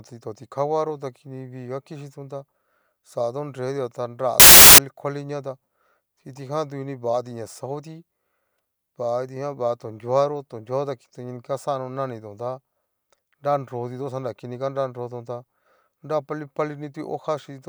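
At 4.40 s, right after "nretua ta", samples built from the wrong bytes take over until 4.78 s. The reader misassembles each sample, so rapidly changing low bits dominate, producing loud, harsh broadband noise. The spectrogram shows a flat broadband block, the waveform a dense band.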